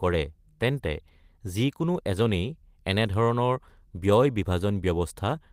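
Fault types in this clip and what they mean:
No technical faults are audible anywhere in the speech.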